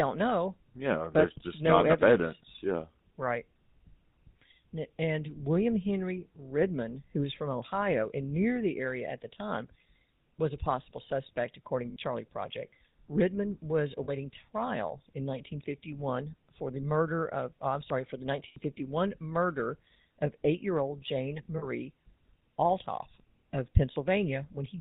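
From start to end the speech carries the GSM full-rate codec's buzzy, gravelly roughness, consistent with a 13 kbps GSM full-rate stream. The vocal-tract model is driven by sparse, regularly spaced pulses. A spectrogram shows nothing above 4 kHz and smeared harmonics.

Lost GSM frames occur at 11.90–11.96 s after "a possible suspect according", at 14.04–14.10 s before "trial in", at 18.48–18.73 s between "I'm sorry for the" and "murder of eight year", and at 21.58–21.67 s. Each time the last good frame is repeated, giving a brief metallic ring. A spectrogram shows frozen bands.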